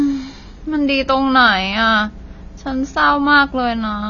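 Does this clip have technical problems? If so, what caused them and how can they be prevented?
Yes. Throughout the speech there is plainly audible codec damage of the kind AAC compression leaves, likely from AAC-LC encoding at a low bitrate, with the sound fitting something around 24 kbps. The encoder saves bits by discarding everything above 6.9 kHz, so the sibilants lose their edge and the voice sounds dull, with a smeared, warbling texture on sustained sounds. On a spectrogram the energy stops at a hard horizontal ceiling near 6.9 kHz. Encoding at a higher bitrate, or keeping a lossless master, prevents this.

From 1.00 s to the end there is mains hum, a steady low tone at 60 Hz sitting roughly 20 dB below the speech. It enters through electrical coupling from the power line, such as a ground loop or a transformer close to the cabling, and it continues steadily under the speech. A spectrogram shows a thin unbroken horizontal line at 60 Hz starting at 1.00 s, and from that point on the waveform carries a small, regular ripple. 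Using balanced cables, a single ground point, and keeping audio lines away from power supplies prevents it.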